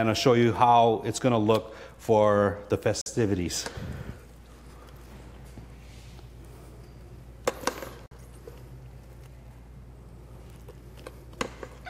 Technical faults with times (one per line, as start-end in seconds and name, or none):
3.01-3.06 gap between chunks
8.06-8.11 gap between chunks